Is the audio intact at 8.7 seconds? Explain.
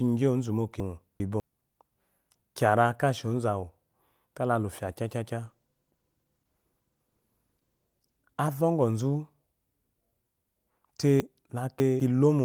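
No. At 8.7 s the audio is inside a call bitrate drop running from 5.46 s to 9.19 s. The call's bandwidth estimate fell, so the encoder was told to cut its rate from 32 kbps to 13 kbps and held that lowest rate for about 2.4 s. With far fewer bits, the speech is coded much more coarsely and sounds rough and watery until the bitrate recovers just after 9.19 s.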